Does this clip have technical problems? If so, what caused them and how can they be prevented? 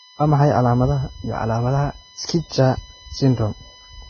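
Yes, two problems run through the whole clip.

USB whine: a steady 1 kHz tone and its multiples sit about 20 dB under the speech, leaking in from the USB bus's 1 ms frame timing through power or ground. To prevent it, use a powered hub, a ground-loop isolator, or an interface with better supply filtering.

Vorbis compression: the speech sounds heavily grainy and hissy with smeared consonants, and there's nothing above 6.5 kHz. That likely comes from low-quality Vorbis encoding, which would fit something around 14 kbps. To prevent it, encode at a much higher quality setting or keep a lossless copy.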